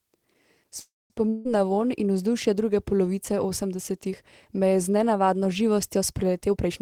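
Around 0.79 s there's a call audio freeze, most likely packets held up in transit so the jitter buffer ran dry. The last sound gets stretched into a fading buzz and then about 0.21 s of silence until 1.25 s. Nothing is lost, but roughly 0.31 s of delay gets pushed into the speech.

Right after, from 1.29 to 1.47 s, comes a long network dropout. About 0.16 s of the speech likely never arrives, and the receiver papers over it with a decaying continuation of the last sound. The speech then picks up at "na vonj in", minus the lost piece.

At the very end, from 6.41 to 6.82 s, there's a jitter buffer speed-up. The receiver trims short pitch-period chunks to shrink a backlog, roughly a tenth of a second in total. The speech runs at about 127% speed at the same pitch, so it sounds rushed.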